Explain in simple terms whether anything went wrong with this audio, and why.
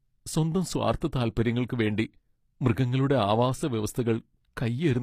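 Yes, two things went wrong. The whole clip has a gritty, metallic top end on the speech, likely from HE-AAC compression, which rebuilds the treble by copying lower sounds upward. Then at about 1.00 s there's pre-echo: a tiny burst of hiss, roughly 16 ms, sneaks in just before a sharp attack and softens it.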